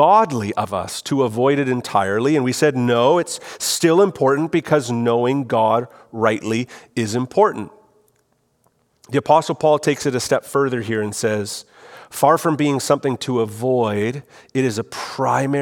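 A speech recording whose signal carries no audible technical fault at any point.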